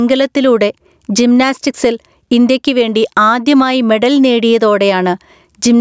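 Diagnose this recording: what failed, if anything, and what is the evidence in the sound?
Gain pumping at the input, throughout. Gain ducks about 10 dB under loud speech. Likely excessive mic gain driving a fast limiter.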